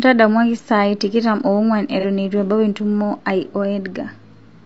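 From start to finish the speech sounds rough and grainy, with noise filling the gaps between harmonics and a thin, synthetic top band. This is likely low-delay AAC compression: its short frames resolve pitch harmonics poorly, and the damage is plainly audible, pointing to around 32 kbps.

From 2.00 to 2.05 s there is a brief smeared, noisy patch from AAC frame loss with concealment. About 30 ms of audio went missing, consistent with a single lost frame, and the decoder filled the gap by reusing the last good spectrum.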